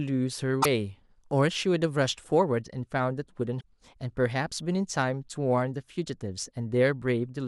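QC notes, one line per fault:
0.59 to 0.66 s: damaged data in a compressed stream. A short glitch cuts into the speech for about 70 ms. Corrupted bytes in the coded stream make the decoder misread those frames and lose sync.
3.57 to 3.64 s: damaged data in a compressed stream. A second brief glitch occurs, again about 70 ms long. The decoder outputs garbled audio until it locks onto the next valid frame header.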